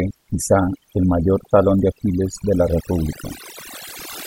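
Overdone noise removal runs from start to finish of the speech. The noise reduction was set too aggressively for a noisy source, so any frequency band sitting close to its noise estimate is pulled far down or gated off entirely, and the softer components of the voice are removed along with the noise. The background drops and breaks up into twinkling, chirpy specks.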